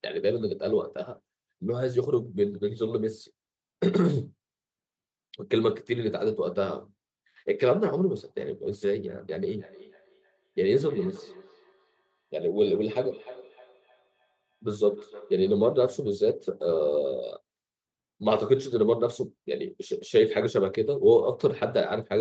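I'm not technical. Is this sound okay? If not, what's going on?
No. From about 9.48 to 15.97 s there is feedback echo between two devices. Two devices in the same room are on the call, and one plays back what the other's microphone sent. That microphone then picks the sound up again. Each echo canceller only removes its own device's playback, so the sound returns roughly every third of a second, fainter than the speech and thinner and more ringing on each pass. Muting or separating one device stops it.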